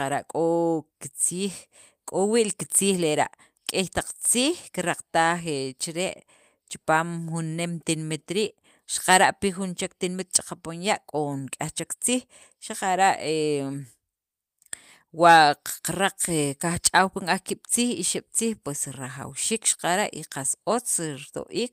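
No technical faults can be heard anywhere in the speech recording. Nothing in the audio path calls for comment.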